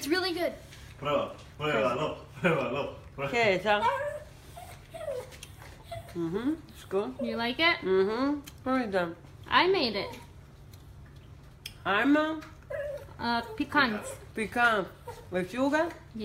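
No technical faults are audible.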